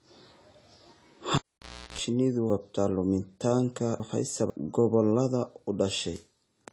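Speech runs through a band-limited, smeared texture with plainly audible codec damage: nothing sits above 11.5 kHz, so a spectrogram shows a flat ceiling there and patchy high bands, which points to a low bitrate around 32 kbps and is likely AAC compression. From 1.36 to 1.99 s a cable pulled and plugged in gives a pop, then a near-flat waveform for about 0.58 s, including a 0.34 s burst of 60 Hz mains buzz, visible as a bright line with harmonics, before a second pop. Between 2.5 and 4.5 s there are chunks out of order: a 500 ms chunk plays three chunks late, so the speech sounds jumbled, and the waveform shows three hard joins.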